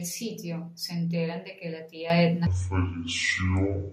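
At 2.1 s, just after "enteran de que la", the speech and the room noise behind it suddenly become louder together, by about 10 dB, with no fade. This is a microphone volume stepped up. The call software judged the input too quiet and raised the device's input gain in a single jump partway through a phrase. Because the boost happens before the sound is captured, the voice and the background rise by the same amount.

From 2.47 s to the end of the clip, the speech turns deep, slow and dragging. It runs at 0.541 times normal speed, and the pitch falls by about ten semitones. This is a section at the wrong speed. Speed and pitch drop together, as happens when samples are played back against the wrong clock. The likely cause is a player or editor handling this stretch at a mismatched rate.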